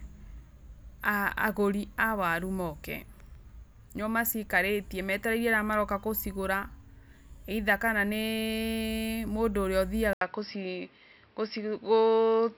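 Speech, and at 10.13 s, right after "mũndũ ũrĩa", an 80 ms gap is followed by audio cut off above 5.6 kHz, with a level shift of about 5 dB and a new faint noise floor, most likely an input switched to a poorer device. The gap and new noise rule out a simple bandwidth drop.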